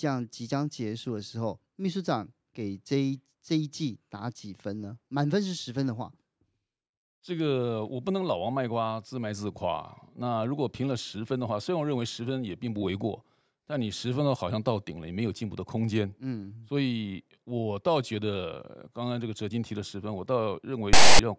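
Near the end, from 20.93 to 21.19 s, the speech gives way to about a quarter of a second of loud, harsh rasp: file tags played as audio. A block of text metadata at the tail of the file has been decoded as if it were samples, and because text bytes cluster in a narrow range the waveform sits lopsided to one side. That offset buzz, with abrupt hard edges, marks it as tag data rather than random codec corruption or white-noise static.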